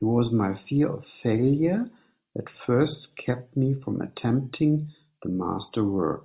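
Speech recording with no audible technical faults anywhere in the signal.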